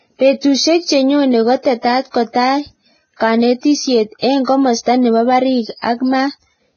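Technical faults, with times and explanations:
Throughout, Vorbis compression: The speech sounds hissy and grainy, with a dull top end that stops at 6.5 kHz and roughened tones where the remaining treble should be. The damage is heavy, and the likely cause is low-quality Vorbis coding, which fits a bitrate of about 17 kbps. The codec discards everything above its cut-off and quantises the upper residue so coarsely that fine detail turns into noise of similar energy.
1.62 to 1.65 s and 2.33 to 2.35 s, pre-echo: Two sharp onsets each arrive after a brief hiss, spread over 27 ms before the first and 22 ms before the second, and the attacks themselves sound softened and smeared. Each onset falls late in a transform block, so quantisation noise sized for the loud attack is spread evenly across the whole block. That includes the quiet stretch ahead of the attack, where nothing masks it.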